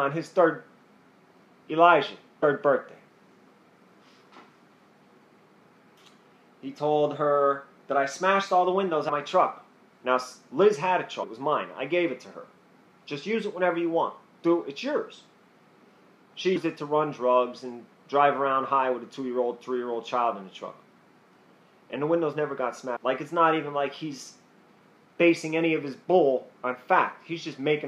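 Compressed frames skipped at 2.42, 9.08, 11.22, 16.55 and 22.95 s: the audio jumps ahead by roughly 0.4 s, 0.15 s (three times) and 0.7 s, which fits dropping whole 26.1 ms frames. Each join is a brief smeared blip, seen as an abrupt spectral discontinuity without a sharp waveform spike.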